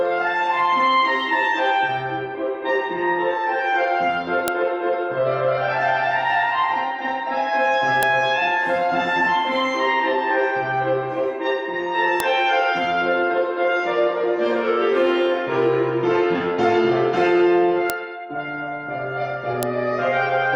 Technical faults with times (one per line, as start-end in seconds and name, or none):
4.48 file header played as audio
8.03 file header played as audio
12.20 file header played as audio
17.90 file header played as audio
19.63 file header played as audio